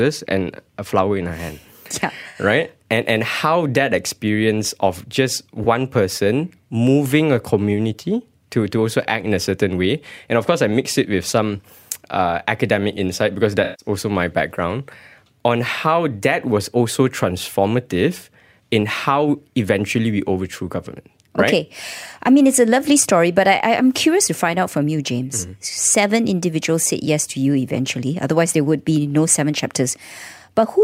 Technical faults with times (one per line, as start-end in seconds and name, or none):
2.29-2.39 AAC frame loss with concealment
5.63-5.66 AAC frame loss with concealment
13.63-13.85 AAC frame loss with concealment